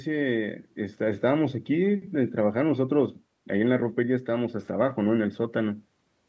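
No technical faults can be heard anywhere in this speech; the missing lowest bass and the lack of content above 8 kHz come from normal call microphone processing.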